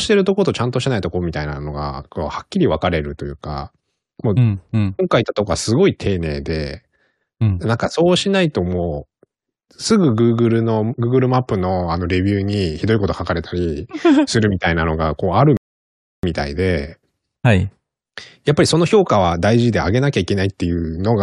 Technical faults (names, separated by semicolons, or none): rebuffering stall